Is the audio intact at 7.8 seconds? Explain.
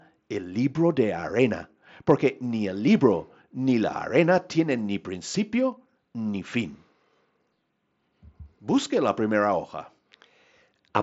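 Yes, the audio at 7.8 seconds is intact, with no dropout, glitch or other fault, only the expected top end of a Bluetooth mSBC headset link, which passes nothing above about 7.7 kHz.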